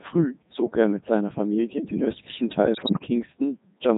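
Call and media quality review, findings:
Codec 2 vocoder, whole clip: robotic, buzzy speech synthesised from pitch and envelope parameters, waveform not preserved. Heavy damage, consistent with the 3.2 kbit/s mode.

Bit errors on digital voice radio, 2.74–3.08 s: sudden pitch, level and timbre jumps, warbling gibberish. Corrupted vocoder frame parameters, error rate roughly 7%.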